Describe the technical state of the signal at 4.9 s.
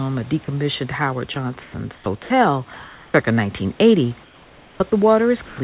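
At 4.9 s we're near the end of a choppy stretch from 4.24 to 4.92 s, where about 580 ms of speech drops into soft synthetic hiss, likely sound chopped by the voice detector.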